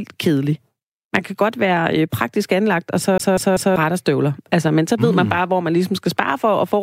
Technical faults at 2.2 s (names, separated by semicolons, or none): none